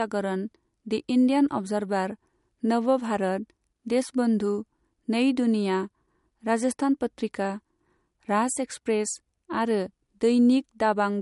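From start to finish the speech carries plainly audible MP3 compression, likely from encoding at a low bitrate on the order of 48 kbps. Nothing survives above 11.2 kHz, where the encoder has cut the treble outright, dulling the top end. Short of bits, it also discards weaker frequency lines, which drop in and out between frames, giving a watery, swirling texture, chirpy sibilants and softened consonant attacks.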